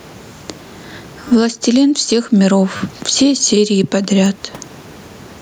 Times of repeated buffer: 1.28-1.31, 2.77-2.80, 4.26

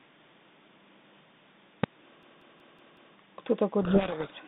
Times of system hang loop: 2.23-3.16

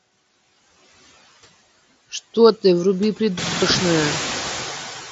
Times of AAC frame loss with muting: none

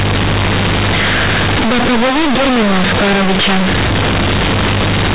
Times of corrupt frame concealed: none

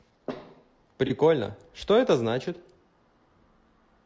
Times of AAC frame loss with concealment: 1.07-1.11

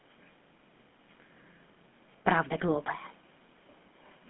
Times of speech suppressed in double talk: none

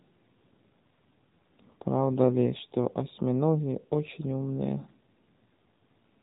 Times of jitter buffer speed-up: none

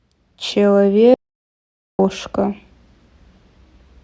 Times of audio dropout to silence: 1.14-1.99

